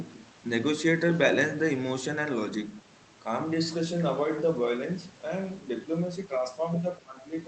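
From 7.01 to 7.18 s, near the end, the speech dips sharply by around 20 dB for roughly 150 ms. This is speech suppressed in double talk. The likely cause is the echo canceller being unable to separate this side's talker from the overlapping loudspeaker echo and ducking everything.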